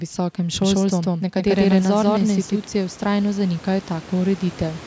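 From 0.62 s to 2.64 s the speech carries a doubled audio track. A second full-band copy trails by roughly 150 ms at about equal level, dry and uncoloured, cutting in and out abruptly. It is likely from a slower second capture path.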